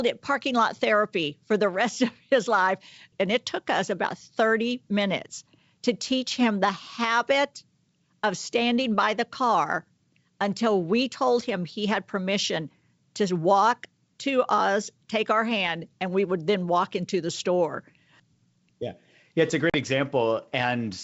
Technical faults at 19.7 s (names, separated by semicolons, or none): packet loss on an ADPCM call